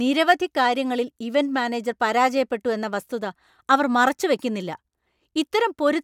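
Speech recording, with no audible technical faults anywhere.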